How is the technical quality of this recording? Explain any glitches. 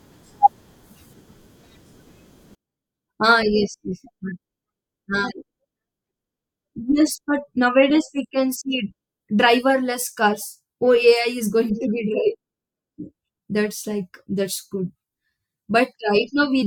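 The recording has one serious fault. From 2.55 s to the end, the speech level collapses by about 36 dB. The likely cause is one channel inverted. Its polarity is reversed. When both channels are summed, the shared centred speech cancels almost completely.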